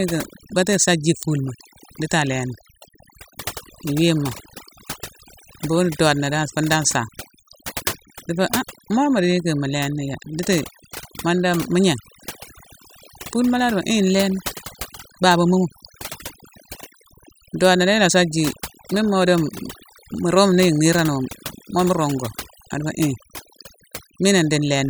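Overdone noise removal runs throughout the speech. A noise reduction stage set too hard pulls individual frequency bands down whenever they sit near its noise estimate, taking quieter parts of the voice along. Gaps fall to near silence with twinkling specks.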